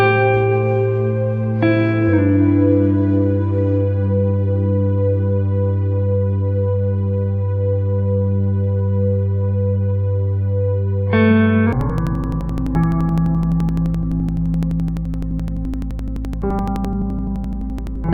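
From 11.73 s to the end at 18.14 s, the audio shows interleaved audio read as planar. Alternating left and right samples are split so each block's first half plays as left and its second half as right, both at half speed. The result drops a full octave, about 12 semitones, sounds doubled, and chops at 11.7 Hz, an 85.33 ms period that fits a 4096-sample block. Unlike a sample-rate mismatch, the overall pace stays correct despite the lowered pitch.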